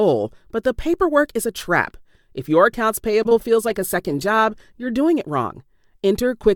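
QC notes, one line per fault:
3.11–3.55 s, repeated packet loss (robotic sound): packets went missing or arrived late several times in quick succession, the longest hole about 18 ms. Each was patched by stretching the previous sound, about 60 ms in total, roughly a fifth of the span, so the audio turns choppy and mechanical.
3.69–5.0 s, call bitrate drop: the call's bandwidth estimate fell and the encoder was pushed to spend far fewer bits. The result fits a fall from 128 kbps to around 28 kbps, held at its lowest for about 1.25 s. Coarser coding leaves the sound rough and watery until the rate recovers.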